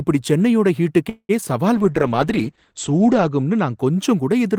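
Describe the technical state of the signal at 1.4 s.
Just before this point, from 1.09 to 1.31 s, the sound stalls: the last sound is stretched into a fading buzz that ends in about 60 ms of silence, then picks up where it stopped. This call audio freeze likely came from held-up packets draining the jitter buffer, adding roughly 0.2 s of delay with nothing lost.

Right after, from 1.41 to 1.44 s, there is a brief smear or wobble. This is short concealed packet loss: about 20 ms of audio never reached the decoder in time, and the receiver extended the preceding sound to bridge the hole before blending back in.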